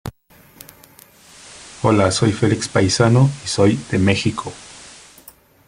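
From 1.08 to 5.31 s the speech falls back from digital to FM via a 434 ms blend: hiss rising to roughly 20 dB below the speech, level shifting about 1 dB.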